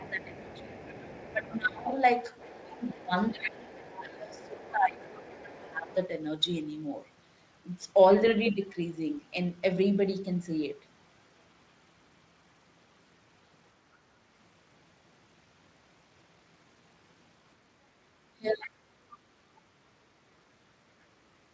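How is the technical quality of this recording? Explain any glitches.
The recording has clear call-processing faults, concentrated in the first 6 seconds and again briefly near 18.4 s. Two kinds recur together: the talker's speech gets pulled down, and a second, quieter voice from the far end bleeds in.

Speech suppressed in double talk occurs from 0.0 to 1.89 s, from 2.48 to 5.9 s, and from 18.37 to 18.92 s. The talker's level sags by about 15 dB, about 20 dB and about 30 dB respectively, across roughly a second and a half, about three seconds, and under half a second. The likely cause is an echo canceller that, with both parties talking at once, couldn't tell near speech from loudspeaker echo and attenuated everything.

The other side's voice leaking through appears from 0.37 to 1.95 s, 2.36 to 4.73 s, 5.15 to 5.94 s, and 18.5 to 18.68 s. It sits at about 20 dB below the talker in most spans and about 25 dB below in the third, audible as a faint background voice. 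This is likely residual echo: the far end played on the loudspeaker was picked up by the microphone and not fully cancelled. The leak overlaps the suppression windows, which fits the canceller struggling during simultaneous speech.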